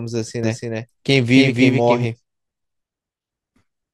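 From 0.43 to 2.05 s a doubled audio track appears: a full-band copy trails about 0.3 s behind at roughly equal loudness, likely from a second, slower capture path. The waveform shows every burst repeated at that fixed offset, and the spectrogram shows each pattern duplicated, starting and stopping abruptly.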